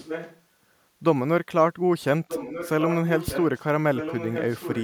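Speech with an echo leak: a delayed copy of the speech returns about 1.24 s later, roughly 10 dB below the direct sound, from 0.0 to 0.41 s, 2.28 to 3.63 s, and 3.95 s to the end. The likely cause is a far-end loudspeaker whose echo canceller let some of the microphone pickup through. A spectrogram shows fainter duplicates of the speech patterns shifted 1.24 s later, and the waveform shows lower-level copies filling the gaps.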